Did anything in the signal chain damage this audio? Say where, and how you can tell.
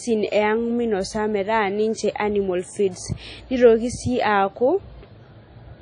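Yes. The codec stage left its mark across the whole speech clip. Nothing comes through above 10.1 kHz, and there's a ringing, washy quality with a hiss that swells and fades along with the speech. That's likely WMA compression: a transform codec with long blocks smears its quantisation noise over tens of milliseconds and drops weak spectral lines. How plainly audible it is fits a low bitrate, somewhere around 32 kbps.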